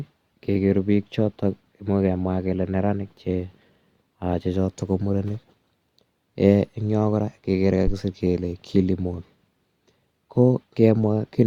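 It's a speech clip with a phantom power thump at 7.87 to 7.94 s, right after "kora kegere" and before "kele kilimall". Supply voltage got switched on or off on a live input, and the step pushed through the coupling capacitors as a deep thud peaking around -10 dBFS, dying away within about 14 ms.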